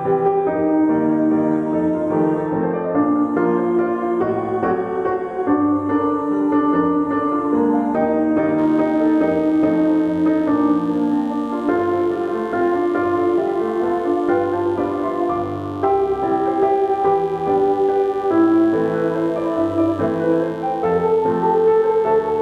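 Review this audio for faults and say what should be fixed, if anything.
A mains buzz comes in at 8.58 s and runs to the end of the clip at 22.42 s, sitting roughly 30 dB below the wanted sound. Sharp switching spikes, twice in each 50 Hz cycle, have been picked up from a dimmer, a rectifier or an unshielded run, so the harmonics stack up into the kilohertz range. That spread of upper harmonics is what makes it raspy rather than the smooth, low 50 Hz tone of a plain hum. To prevent it, keep audio cabling shielded and away from dimmers and switching supplies.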